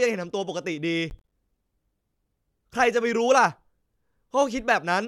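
Processor overload crackle from 1.1 to 1.32 s: about ten short buffers miss their deadlines and drop to silence, leaving hard-edged gaps heard as gritty crackle.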